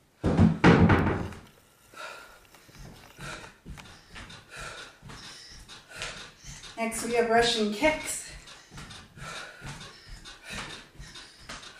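No technical faults can be heard anywhere in this recording.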